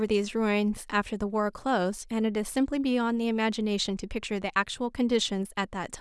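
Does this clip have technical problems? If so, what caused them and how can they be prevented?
No, nothing in this speech recording stood out as a technical problem on listening, so there is nothing here that needs preventing.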